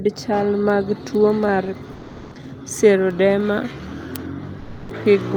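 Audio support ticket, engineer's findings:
Comfort noise in place of the background, 1.91 to 2.35 s and 4.59 to 4.89 s. Real background in speech pauses (about 22 dB and about 19 dB below loud passages) swapped for steady, featureless hiss, about 1 dB and about 4 dB quieter. Likely Opus DTX: sender stops transmitting during silence, receiver synthesises shaped noise until speech resumes.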